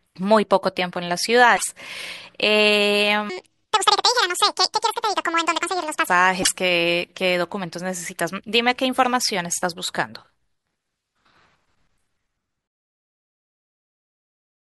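At 1.53 to 1.64 s, damaged data in the compressed stream makes the decoder lose sync, producing a brief glitch while it searches for the next frame header. From 3.30 to 6.07 s, a section at the wrong speed runs the speech 1.77 times fast, raising the pitch by around ten semitones. That likely comes from playback against the wrong clock. Speed and pitch shift together, which distinguishes it from a pitch-only effect. At 6.39 to 6.49 s, a second burst of corrupted frames gives another short glitch.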